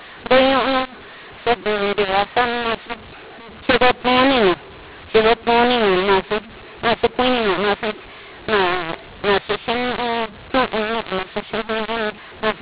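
From start to finish there's a mu-law and A-law mix-up: A-law telephone coding decoded as mu-law, so levels scramble, speech turns harsh, and pauses fill with hiss.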